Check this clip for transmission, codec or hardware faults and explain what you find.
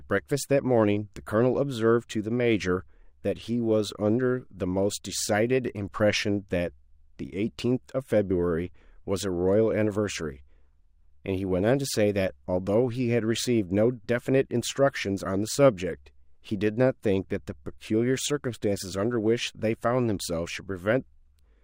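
One fault runs through the whole speech clip. Imaging from linear upsampling, throughout: straight-line interpolation, consistent with a 24 to 48 kHz rate change, dulls the highs and leaves faint mirror images between 12 and 24 kHz, giving sibilants a metallic shimmer.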